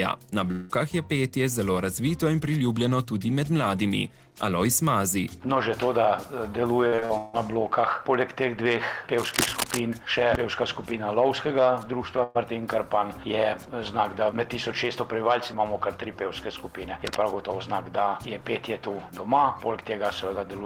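Right at the start, from 0.51 to 0.71 s, there's what sounds like a long network dropout, though a short one for that label. The audio stops arriving and the receiver stretches the last bit of sound into a fading buzz-hiss for about 180 ms. It never drops to silence. When the audio picks up again, roughly 180 ms of the original is gone. That's most likely a stall in the stream rather than anything at the source.

Between 6.87 and 7.35 s you get repeated packet loss, the classic robotic sound. There are five separate holes in under half a second, the longest about 158 ms. Each one gets papered over by extending whatever came just before, and the next hole lands before things settle. About 58% of that stretch is concealment rather than real audio, so it comes out choppy with chunks missing.

From 9.16 to 9.80 s there's cable scratch noise: dense, uneven crackle and rustle sitting right on top of the sound at about the same level as the sound itself. 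It comes back more briefly from 17.05 to 17.21 s, about 10 dB under the signal, so it's more of a quick scuff there. Both are likely a worn cable or connector being moved, with the contact resistance jumping around as it shifts.

At 12.23 to 12.37 s there's a burst of packet loss, a single gap with roughly 120 ms of audio lost. The receiver fills the gap, about 115 ms, by holding the last sound and letting it fade, so you hear a brief held buzz or dying hiss. Then the audio jumps ahead, with that slice simply missing.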